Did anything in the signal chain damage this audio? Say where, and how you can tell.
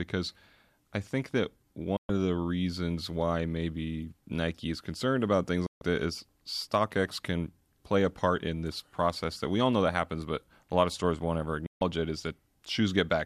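Yes. A digital broadcast dropout mutes the speech three times: 1.97 to 2.10 s, 5.66 to 5.82 s, and 11.66 to 11.82 s. This happened at reception, not in the studio chain. Each gap is silent for 120 to 144 ms and closes with a 3 ms fade rather than a click. That fits the receiver muting after frames of roughly 24 ms failed to decode, five or six at a time. What was sent during those holes is gone for good.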